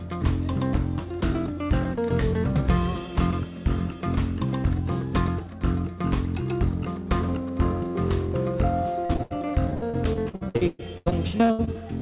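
From 9.06 to 11.75 s there's repeated packet loss: about twenty short holes, the longest around 117 ms, each papered over by stretching the last bit of sound, so roughly a third of that stretch is concealment. It's choppy, with pieces missing, over narrowband sound that stops at 4 kHz.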